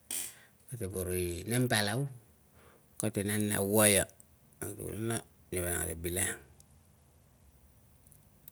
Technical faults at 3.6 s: none

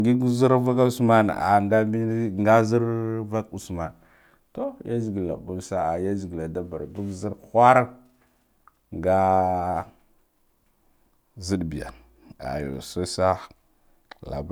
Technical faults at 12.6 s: none

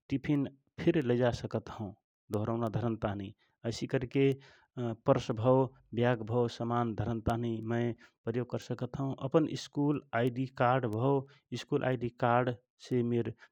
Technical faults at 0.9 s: word clock ticks

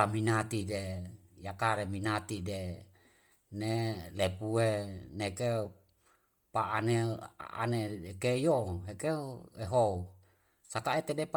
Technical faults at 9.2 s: Bluetooth LC3 compression

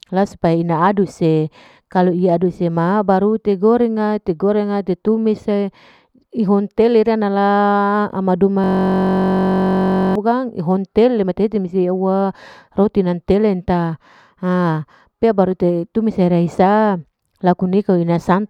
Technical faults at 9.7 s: system hang loop

